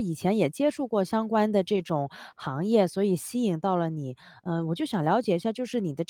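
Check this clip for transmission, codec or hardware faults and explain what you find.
One transmission fault is present. From 1.75 to 1.81 s there is a lost packet rebuilt from error correction. Later packets carried low-bitrate copies of the missing audio, and the decoder played 40 ms of them, consistent with two lost packets. There is no gap, but the speech briefly turns rougher and noisier.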